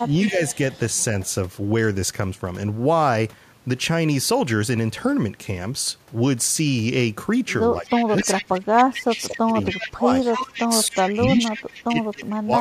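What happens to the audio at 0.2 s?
A delayed copy of the voice runs under the speech from 0.0 to 0.79 s, trailing by about 264 ms and sitting about 15 dB below it. This is an echo leak, likely from a loudspeaker side whose echo canceller let part of the played-back voice through.

Within that span, from 0.3 to 0.4 s, the speech dips by around 5 dB for about a tenth of a second. This is speech suppressed in double talk, likely because the canceller couldn't separate the local talker from the echo and turned both down.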